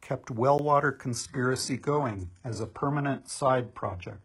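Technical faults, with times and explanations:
0.58 s, block of digital silence: the output likely stopped being filled for a moment and about 10 ms of samples came out as zeros. The speech drops to dead silence and back with no fade, so the hard edges produce a brief tick.
1.13 s to the end, adaptive stream at a lower bitrate: the stream switched abruptly to a much leaner encoding, consistent with a drop from AAC-LC near 96 kbit/s to HE-AAC near 12 kbit/s. Nothing remains above 11.5 kHz, and the speech turns dull, with no gap at the change.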